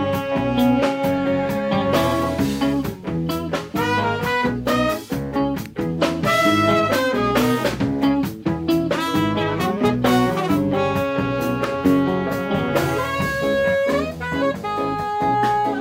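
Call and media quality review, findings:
Electrical switching spike: sharp snaps at 5.66 s and 11.64 s, peaking around -15 dBFS. Likely a nearby switch or motor arcing, with the audio line picking up each discharge.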